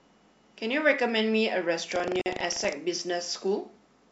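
From 1.88 to 2.73 s, the program filling the playback ring buffer and the hardware reading it have drifted into each other, producing buffer tearing. In every period a small slice of the buffer still holds speech from a lap earlier, about a tenth of a second old, joined hard at both ends. The result is a steady robotic buzz at 25 Hz riding on the speech.

Inside that stretch, at 2.21 to 2.26 s, separately encoded pieces were joined without trimming the encoder's start delay and end padding, leaving a gap at the join of encoded pieces. The speech drops into a 46 ms gap with smeared edges, then resumes where it stopped.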